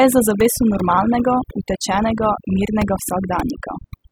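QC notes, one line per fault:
Throughout, overdone noise removal: the noise reduction was pushed too hard on a noisy speech recording, so any frequency band sitting close to its noise estimate gets dropped nearly to nothing. The background drops and breaks up into little twinkling specks, and the quieter parts of the voice get eaten too.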